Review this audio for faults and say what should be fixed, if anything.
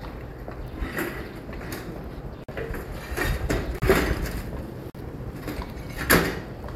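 Three blocks of digital silence drop out of the sound, at 2.44 to 2.49 s, 3.79 to 3.82 s and 4.90 to 4.95 s. They last 46 ms, 35 ms and 46 ms. Each cuts out hard and back with no fade, and each gap sounds like a short hole. The two 46 ms gaps fit a 2048-sample buffer that was not filled in time. Give the audio thread a larger buffer or higher scheduling priority so that every block is written before playback needs it.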